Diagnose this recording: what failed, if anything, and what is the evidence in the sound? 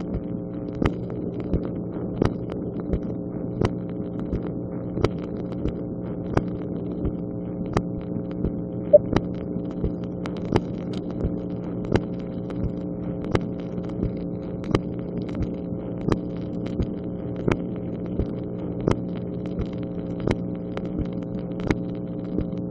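Two brief breaks interrupt the flow, at 5.17 s and from 15.31 to 15.35 s, each followed by sound that has jumped ahead, by roughly 70 ms and 20 ms. This is compressed frames skipped at the codec decode stage: whole frames were missing or rejected, so the audio jumps ahead by their length.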